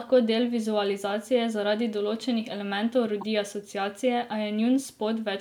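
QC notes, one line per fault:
3.19–3.23 s, corrupt frame decoded: flipped bits in a few consecutive compressed frames went undetected, and the decoder played them as if they were valid. The misread gains and codes placed energy at frequencies unrelated to the speech for the length of those damaged frames, roughly 46 ms in all. The result is a short chirp, squeak or burst of noise peaking at around -25 dBFS before clean decoding resumes.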